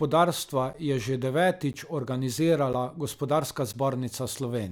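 From about 0.73 s to 3.74 s the speech has periodic USB or driver dropouts: roughly 10 ms silent gaps every second, heard as four regular ticks.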